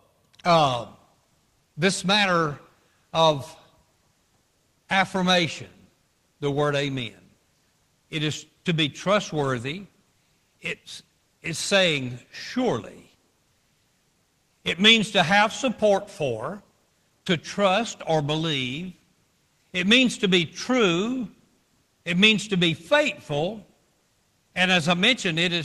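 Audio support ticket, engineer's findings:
No faults found in this speech recording. The call path is audible as normal codec behaviour, with the top end stopping at about 12 kHz, which fits Opus at a modest speech bitrate.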